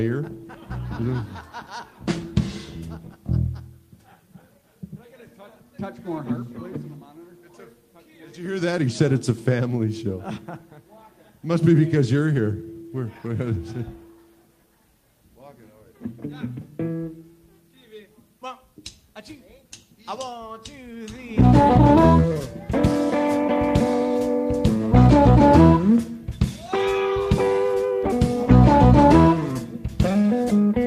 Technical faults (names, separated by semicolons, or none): none